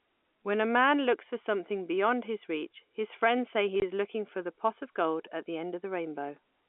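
Packet loss filled with silence at 3.80 to 3.82 s, between "his friends say he" and "is looking for the": a 20 ms gap, fitting one lost packet, with hard edges over the narrow telephone band.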